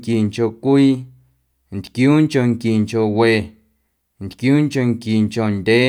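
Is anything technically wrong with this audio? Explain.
No, no technical faults here.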